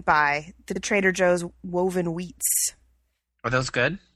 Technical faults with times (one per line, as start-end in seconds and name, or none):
0.75-0.80 repeated frames
2.47-2.58 repeated frames